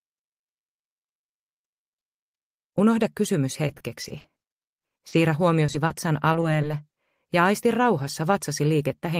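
The audio has repeated packet loss (robotic sound) from 3.67 to 5.14 s. About a dozen gaps, none longer than 40 ms, were filled by continuing the preceding sound. Concealment covers about a fifth of that stretch. The result is choppy and robotic. Short concealed packet loss follows at 5.66, 5.72, 5.86, 6.32 and 6.40 s. Each hole is brief, mostly 20 ms, one 40 ms. The receiver extended the last sound, then blended back. These pass as small smears or wobbles.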